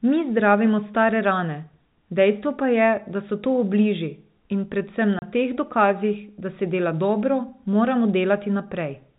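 At 5.19 s there's a packet loss filled with silence: a 30 ms hole runs to 5.22 s, which fits a single lost packet. The receiver just dropped in silence, so the speech cuts out abruptly with hard edges, over the band-limited telephone sound of the G.711 line.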